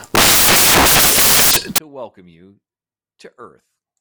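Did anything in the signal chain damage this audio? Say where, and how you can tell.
Yes: sample-format conversion built samples from the wrong bytes from 0.00 to 1.78 s, turning the speech into loud, harsh broadband noise that fills the spectrogram and the waveform.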